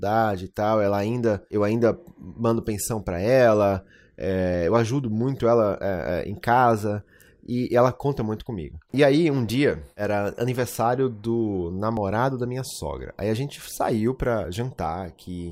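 A recorder likely working in 2.5 s chunks loses roughly 20 ms at each handover and splices the edges straight together, leaving audio missing between chunks. Brief skips land at 7.02 s after "é é em casa", 9.49 s after "aí um", and 11.97 s before "da minha sogra".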